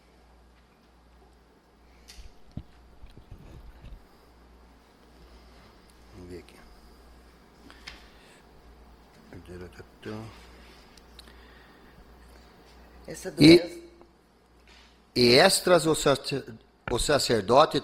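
Adaptive stream at a lower bitrate from 8.53 s onward: the connection slowed, so artefacts rise abruptly without a gap, consistent with a drop from roughly 64 to 24 kbit/s.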